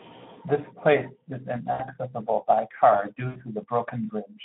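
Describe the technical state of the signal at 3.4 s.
Right at 3.4 s you're at the tail of a VoIP packet loss gap concealed by the speech codec, running 3.27 to 3.41 s, about 80 ms. The decoder stretches its last pitch and filter into a fading buzzy tone or coloured noise. Underneath, the Speex codec damage is plainly audible: hoarse, noisy speech squeezed into a 150 Hz to 3.6 kHz line band, which fits a low setting around 11 kbps.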